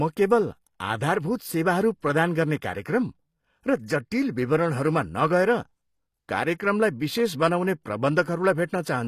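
HE-AAC compression runs throughout this speech, likely from a low bitrate near 24 kbps: treble above 14.9 kHz is gone, and rebuilt upper bands make sibilants gritty and metallic.

Pre-echo at 6.58 s: a sharp attack falls late in a transform block, so codec noise spreads about 19 ms ahead, adding brief hiss and softening the onset.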